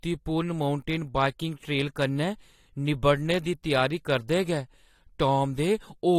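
A speech recording runs with the same degradation from start to finish. Nothing survives above about 16.6 kHz, and two layered kinds of coding damage are heard together. This is likely transcoding between lossy codecs. The sound fits a Vorbis encode at moderate bitrate later re-encoded as lower-bitrate AAC-LC, with the second encoder spending bits on the first one's artefacts and adding its own. On a spectrogram this appears as a flat ceiling at 16.6 kHz across the whole clip, with speckled, blocky energy below it in the top octave.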